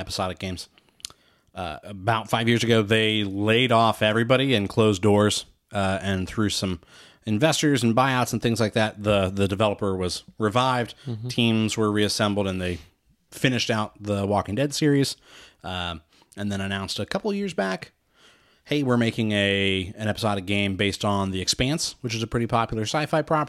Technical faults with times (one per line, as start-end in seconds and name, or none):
none